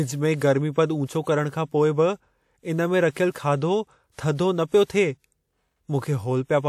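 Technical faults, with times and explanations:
3.11–3.16 s and 4.84–4.90 s, pre-echo: just after "इन में" and again after "न पियो", a short hiss rises for about 57 ms and 54 ms before a sharp onset, which then sounds blunted. The transform codec spread noise meant for the loud attack across the whole block, including the quiet stretch ahead of it. On a spectrogram this shows as a thin broadband smear before the attack's vertical edge; the waveform shows low-level fuzz where there should be near-silence.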